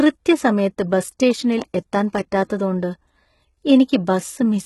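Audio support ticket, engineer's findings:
HE-AAC compression throughout: heavy codec damage, gritty and metallic s sounds, nothing above 11.8 kHz. Probable component: encoder, likely HE-AAC at a rate that fits 16 kbps. Treble is rebuilt by copying lower bands upward, so harmonics misalign. Distinct from plain low-pass filtering.

Loud pop, 1.62 to 1.64 s: single sharp pop, about 5 dB above the speech, which continues underneath. Probable component: a voltage step from plug, switch, static or driver glitch. Distinct from a dropout because nothing is lost.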